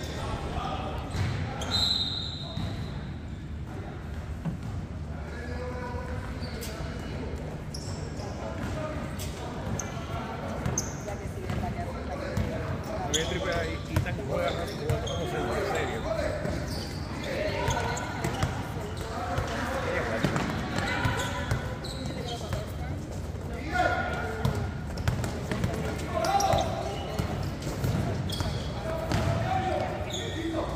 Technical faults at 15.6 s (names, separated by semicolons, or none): corrupt frame decoded